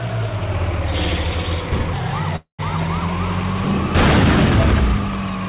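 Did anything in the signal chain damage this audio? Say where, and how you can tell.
Yes. A call audio freeze occurs at the network and jitter buffer stage, from 2.36 to 2.61 s. The last sound is stretched into a fading buzz for about 225 ms, and roughly 110 ms of that is near silence. The audio then resumes exactly where it stopped. Nothing is lost, but everything afterwards is shifted about 0.23 s later. That pattern likely comes from packets stalling in transit, so the buffer ran dry and the receiver concealed the gap. The band limit at 4 kHz is the normal behaviour of the G.711 A-law call path.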